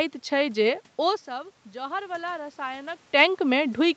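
From 1.27 s to 3.09 s the automatic gain rises: the input level drops by about 16 dB, the talker having moved away, and the gain control slowly adds about 4 dB. Voice and room noise swell together over nearly two seconds.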